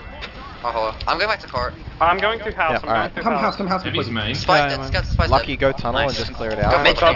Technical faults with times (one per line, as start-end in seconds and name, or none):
none